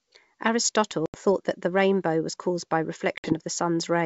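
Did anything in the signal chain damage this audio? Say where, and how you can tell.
Yes, packet loss on an ADPCM call (network stage): sharp-edged blank spectrogram columns and flatlined waveform at 1.06–1.19 s and 3.18–3.33 s, after which the decoder's predictor and step size must resync.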